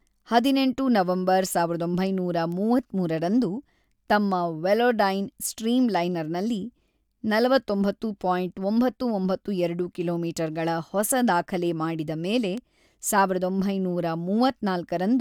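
Two sharp, isolated ticks sit on this speech recording, one at 2.52 s just after "ಹದಿನೆಂಟು ನವೆಂಬರ್ ಸಾವಿರದ ಒಂಬೈನೂರ" and one at 12.58 s after "ಹೊಸ ದಾಖಲೆ ಮಾಡಿದ ಮೇಲೆ", each peaking around -22 dBFS. Both are bit error spikes: a flipped bit made one sample, then three consecutive samples, jump by a power of two, giving a broadband click unrelated to the speech.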